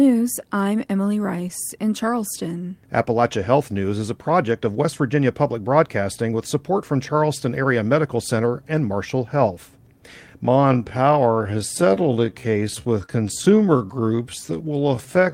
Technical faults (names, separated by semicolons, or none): lost packet rebuilt from error correction; time-stretched section; short concealed packet loss